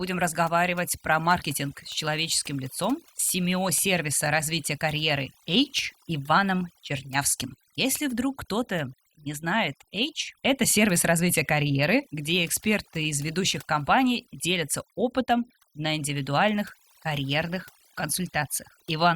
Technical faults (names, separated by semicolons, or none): overdone noise removal